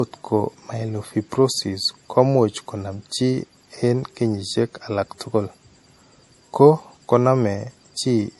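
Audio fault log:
throughout, low-bitrate audio saved at a high bitrate: the speech sounds dull, with a hard ceiling above which nothing is heard, at about 11.5 kHz. The likely cause is an early MP3 pass at a low rate, which fits roughly 48 kbit/s, later re-encoded at a much higher rate, around 248 kbit/s. The second pass preserved the damage from the first without restoring the missing top end.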